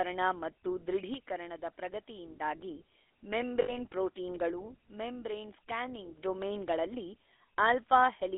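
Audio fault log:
throughout — GSM full-rate codec: The speech is confined to a telephone band of roughly 300 Hz to 3.6 kHz and carries a plainly audible buzzy, gravelly roughness. This comes from a coarse vocal-tract model driven by a sparse, regularly spaced pulse excitation, which fits the 13 kbps full-rate coder. Unlike ordinary band-limiting or a cleaner narrowband codec, the harshness sits inside the voice itself rather than only in missing highs.
3.62–3.77 s — lost GSM frames: For about 0.15 s the sound freezes into a rough, metallic ring instead of continuing naturally. The decoder is reusing the settings of the last good frame, and the span fits three lost 20 ms frames, about 60 ms of missing data. A dropout would go silent and a click would be instantaneous, but this is a brief held tone.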